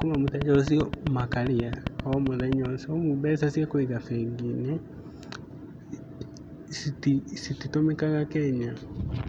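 Speech opens with a train of clicks from 0.02 s to 2.66 s: about twenty near-identical pulses at a steady 7.58 per second, standing well above the voice and audible in the gaps as well. Their even spacing and matching shape set them apart from random crackle or a lone edit click. The regular pulse most likely comes from electrical interference or a faulty connection or power supply.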